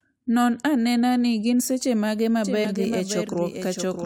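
At 1.54 to 1.61 s, compressed frames are skipped, so about 20 ms of speech is skipped just before "seche mage". From 2.44 s to the end, a doubled audio track, likely a second capture through a slower path, adds a dry full-band copy roughly 700 ms late and about 5 dB quieter. At 2.64 to 2.66 s, after "seche mage", more frames are skipped, jumping ahead roughly 50 ms.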